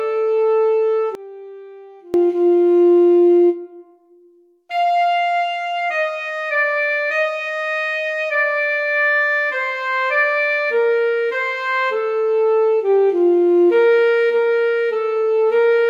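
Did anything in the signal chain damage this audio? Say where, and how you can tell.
Yes. From 1.15 to 2.14 s the centre collapses, dropping about 22 dB and leaving a faint residue, likely one channel inverted in analogue wiring, cancelling when summed to mono.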